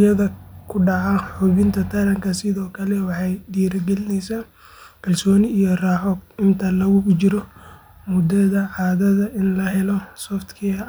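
Nothing in the speech recording points to a technical fault: the signal holds steady throughout, with no disruption anywhere along its length.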